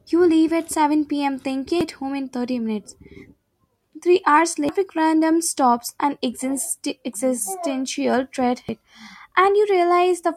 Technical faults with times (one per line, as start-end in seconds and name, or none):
1.81-1.84 damaged data in a compressed stream
4.69-4.72 damaged data in a compressed stream
8.69-8.72 damaged data in a compressed stream